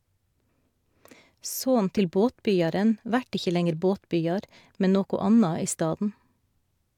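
Nothing technical gets in the way of this short speech recording, since there's no fault to point to anywhere in it.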